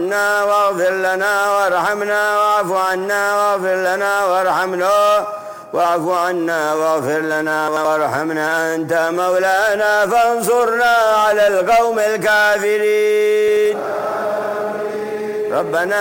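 Chunks out of order at 7.68 to 7.85 s and again at 13.48 to 13.65 s: in each, one block of about 85 ms plays one block late, swapping places with its neighbour. Nothing is missing, but the sound jumps and briefly scrambles across the three hard joins.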